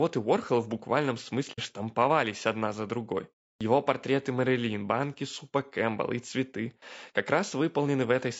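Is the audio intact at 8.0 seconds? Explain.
No. At 8.0 seconds, as throughout the clip, the speech carries low-delay AAC compression, likely from AAC-ELD at around 32 kbps. Its short frames resolve pitch harmonics poorly at that bitrate, so the voice sounds plainly rough and grainy, with noise between harmonics and a synthetic-sounding top band.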